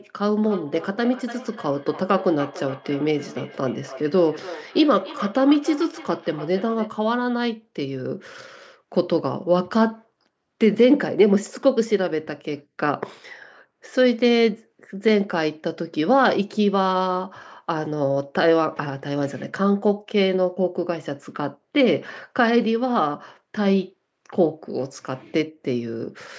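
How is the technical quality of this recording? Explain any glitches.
The recording has one clear fault, in its opening seconds. From 0.46 to 6.94 s there is feedback echo between two devices: one device plays another's microphone signal, that microphone recaptures it, and neither echo canceller removes it. The speech returns roughly every 300 ms, thinner and ringing, peaking about 17 dB below the direct speech. The call's microphone processing leaves nothing above 8 kHz.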